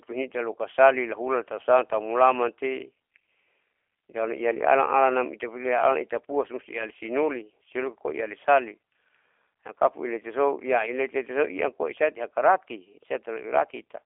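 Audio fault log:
throughout, G.729 codec: speech rebuilt from sparse pulses sounds plainly rough and synthetic; the spectrogram is empty below 300 Hz and above 3.4 kHz, fitting 8 kbit/s.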